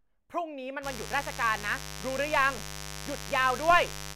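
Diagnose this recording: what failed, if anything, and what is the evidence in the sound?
Mains buzz, entering in the analogue wiring. A steady, raspy buzz starts at 0.81 s and runs to the end. It sits only about 10 dB under the speech. Sharp switching spikes, twice per 50 Hz cycle, leak in and spread harmonics into the kilohertz range.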